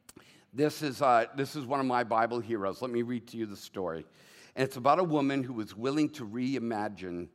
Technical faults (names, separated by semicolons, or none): none